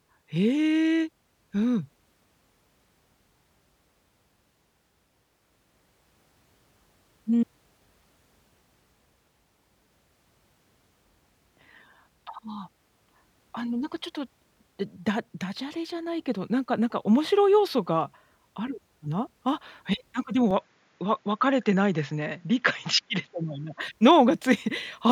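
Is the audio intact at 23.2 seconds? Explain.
No. From 20.51 to 23.81 s the speech turns duller and boxy, with nothing above 7.2 kHz and a faint new noise floor far below the signal, at the same level and with no gap. This is likely an input switched to a poorer device.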